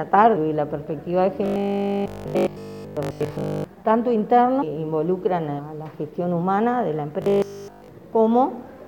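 At 0.35 s the sound jumps forward with a brief smeared blip, losing roughly 200 ms. These are compressed frames skipped: whole frames of about 26 ms each are missing or rejected by the decoder, and their overlap blurs the join. From 1.46 to 3.64 s the sound turns into a rigid, metallic buzz at 50 Hz. This is robotic sound from repeated short buffers, likely caused by audio arriving too slowly, so that a 20 ms chunk is replayed in place of essentially all new audio. Further skips follow at 2.34 s (roughly 150 ms), 3.41 s (roughly 100 ms), 4.61 s and 5.58 s (roughly 400 ms each). The same 50 Hz buzz returns from 7.22 to 7.88 s.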